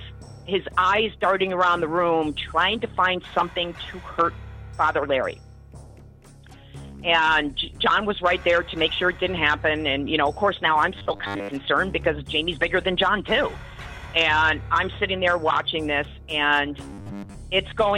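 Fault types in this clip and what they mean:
Robotic sound from repeated short buffers: from 10.96 to 11.54 s and again from 16.93 to 17.34 s, the sound turns rigid and metallic over a steady 100 Hz buzz. This is likely because audio arrived too seldom and a 10 ms chunk was replayed to fill the gaps, skipping roughly 70% of the real signal. A spectrogram shows evenly spaced harmonics every 100 Hz, and the waveform shows one short cycle copied repeatedly.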